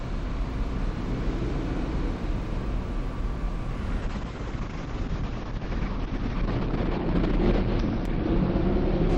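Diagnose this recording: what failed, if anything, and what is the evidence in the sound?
A call bitrate drop in the codec stage begins at 4.02 s and lasts to the end of the clip. From that point the sound turns rough and muffled. The top end collapses from a full 20 kHz band to about 6 kHz, and coarse, watery texture persists through the final 3.3 s at the lowest quality. That fits the encoder being pushed from around 96 kbps down to roughly 8 kbps after the call's bandwidth estimate fell. On a spectrogram, energy above 6 kHz is gone through the final 3.3 s, leaving a hard horizontal ceiling, with smeared, blocky detail below it.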